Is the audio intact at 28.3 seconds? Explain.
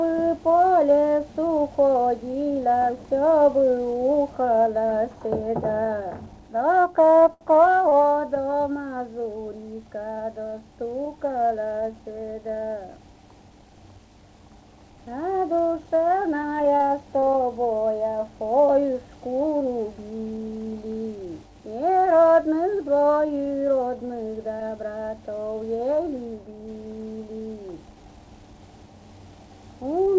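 Yes, the audio is intact at 28.3 seconds, with no dropout, glitch or other fault at that moment.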